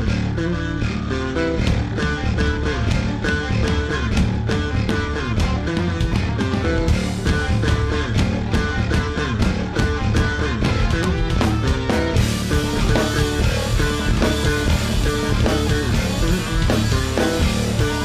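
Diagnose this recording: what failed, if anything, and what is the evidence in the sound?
Nothing in the signal chain gave way here, as there's nothing to point at from the wiring through to playback.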